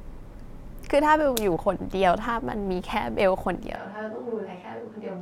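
At 3.76 s the speech turns suddenly roomy and hollow, loses low-frequency body, and drops by roughly 5 dB; the background noise rises to around 30 dB below the speech. The change stays in place through to the end of the clip. This is the signature of a switch to a distant microphone, likely a failed or omitted close mic with the recording falling back to one further away that picks up more room reflection and ambient noise.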